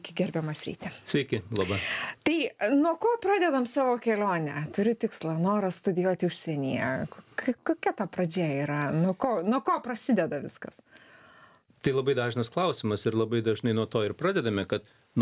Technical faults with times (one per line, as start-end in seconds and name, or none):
none